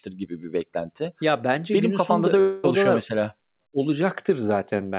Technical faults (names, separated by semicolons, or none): long network dropout